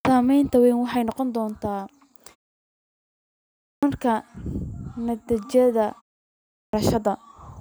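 A speech clip with a clipped start after a pause, twice: at 3.53 to 3.83 s, after a 1.26 s pause, and at 6.42 to 6.73 s, after a 0.49 s pause, roughly 0.3 s of the opening sound goes missing each time, so the speech snaps in abruptly. The output device is dozing off in the silence and hasn't woken up in time.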